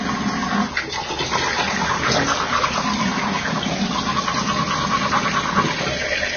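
Throughout the clip, heavy Vorbis compression is the likely cause: an encode at a bitrate around 20 kbps removed everything above 6.5 kHz and quantised the remaining treble so coarsely that fine detail became noise, leaving the sound hissy and grainy with blurred attacks.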